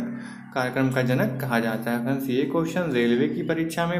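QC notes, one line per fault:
0.00–2.00 s, pre-emphasis left on: the sound is thin, bright and hissy, with treble sitting about 8 dB above the 1 kHz level at 10 kHz. A treble boost, fitting the CD 50/15 µs curve, was never undone by the matching de-emphasis cut.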